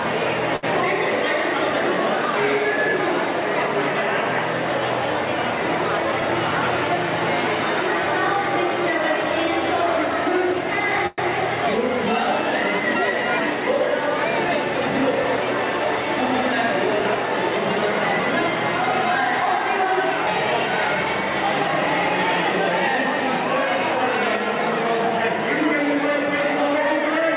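At 0.56 to 0.65 s a sound hangs on for about 66 ms with a slight buzz or dip. This is a short stall from a late packet: the jitter buffer ran dry and the last sound was stretched until the data arrived. Nothing is lost. At 11.07 to 11.20 s the audio freezes for about 111 ms, the held sound turning into a fading buzz or hiss without dropping to silence, then resumes where it stopped. This call audio freeze was likely caused by packets held up in transit emptying the jitter buffer. From 14.48 to 15.38 s the audio runs about 5% fast at unchanged pitch, sounding hurried, and from 16.49 to 18.52 s about 3% fast. These are jitter buffer speed-ups, in which the receiver trimmed pitch-period pieces, around 50 ms and 70 ms in total, to reduce excess delay. Throughout, nothing is heard above 4 kHz, which fits a narrowband call codec such as G.711.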